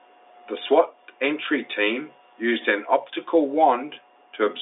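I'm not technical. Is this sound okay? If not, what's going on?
Yes, it's fine: nothing goes wrong anywhere in this speech, and the slightly narrow, phone-like quality is just how an ordinary telephone line carries sound, since G.711 telephone coding leaves out everything above about 3.8 kHz.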